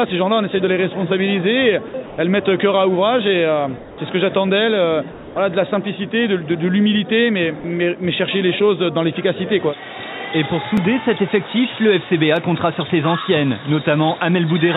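Between 1.88 and 1.94 s, 2.06 and 2.18 s, 5.12 and 5.36 s, and 7.6 and 7.64 s, the sound is cut short and replaced by steady, featureless noise. This is sound dropped by the voice detector: quiet parts of the signal were likely classed as background, so transmission stopped and comfort noise filled the gaps.

From 3.78 to 3.98 s, comfort noise stands in place of the background. The real background, sitting about 19 dB below the loud parts, gives way to a smoother synthetic hiss about 3 dB quieter, likely because discontinuous transmission paused sending during the pause.

At 10.77 s and 12.37 s, a repeated buffer produces a brief click-like buzz. A 5.8 ms piece plays twice with a hard join, which fits a 256-sample buffer being replayed when new audio arrived late. No audio is lost, and the band-limited G.711 call path stays under 4 kHz throughout.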